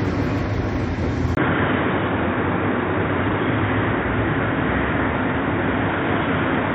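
At 1.35 s, after a 20 ms gap, the sound turns dull and boxy until the end, with nothing above 3.7 kHz, a level shift of about 5 dB and a new low hiss. This is likely an input switched to a poorer device. A spectrogram shows the top abruptly cut off.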